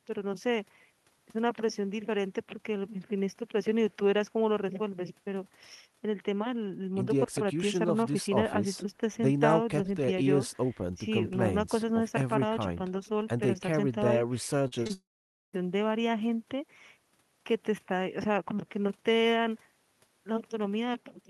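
At 14.67 to 14.74 s, 14.84 to 14.87 s and 14.87 to 14.91 s, short concealed packet loss leaves brief smears in the speech. About 40 ms, then 20 ms and 20 ms, failed to arrive and were patched by extending the preceding sound. Each gap is bridged and the speech carries on.

From 14.93 to 15.55 s, a long network dropout, likely from a network outage, takes about 0.6 s. Unlike the short patches, the filled-in sound fades and leaves roughly half a second of silence, and the speech returns with that stretch missing.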